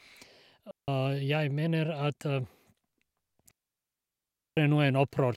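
At 0.71 s the speech drops into a clean hole of near silence lasting about 0.17 s, ending at 0.88 s. At 3.51 s a second, much longer gap runs to 4.57 s, about 1.06 s. Both are digital wireless dropouts. The radio link lost too much data, so the receiver muted its output with a very short fade. No burst of noise marks either edge. The sound simply vanishes and returns.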